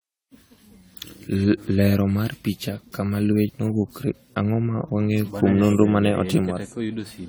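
From start to end the speech carries generation loss, most likely from being decoded and re-encoded around seven times through an AAC-LC chain, with the artefacts consistent with something like 64 kbit/s. Each pass requantised the signal on a shifted frame grid, so noise and spectral holes accumulated. The result is swirly, smeared and hollow beyond what that rate would give once, with consonant attacks blurred, even though content still reaches about 20.1 kHz.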